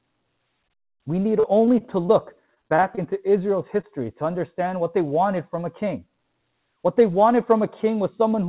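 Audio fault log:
1.40–2.10 s and 2.46–2.99 s, repeated packet loss (robotic sound): in each stretch the stream kept dropping out in short bursts, with gaps of up to 34 ms in the first run and 21 ms in the second. The receiver bridged each hole by extending the preceding sound, filling about 103 ms and then about 120 ms, roughly 15% and 23% of those spans. Because the bridges come in quick succession, the sound turns choppy, with pieces missing. The narrow band, with nothing above 4 kHz, fits a 64 kbps G.711 A-law call path.
3.81–3.85 s, short concealed packet loss: about 20 ms of audio failed to arrive in time. The decoder covered the hole with roughly 18 ms of sound continued from what came just before, then blended back into the real signal. The result is a single brief smear or wobble rather than a run of choppiness.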